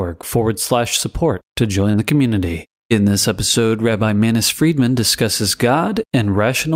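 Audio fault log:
1.91–1.95 s, short concealed packet loss: between "forward slash support to" and "the community", about 20 ms of audio failed to arrive in time. The receiver covered the gap with about 19 ms of material extrapolated from the preceding sound, then crossfaded back into the real signal, so a brief smear or wobble replaces what was lost. A plain dropout would instead leave a hard gap of silence or a sharp click.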